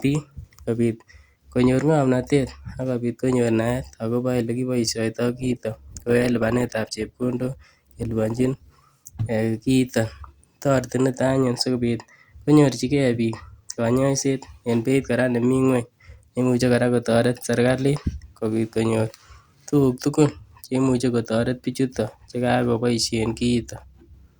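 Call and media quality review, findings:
Sudden drop in clarity at 5.27 s, codec artefacts rising, no gap, clean return at 9.27 s. Adaptive stream at a lower bitrate for 4 s: player switched to a leaner rendition when the connection slowed. Sound points to Opus stepping from about 64 to 24 kbit/s. Content still reaches 20.2 kHz.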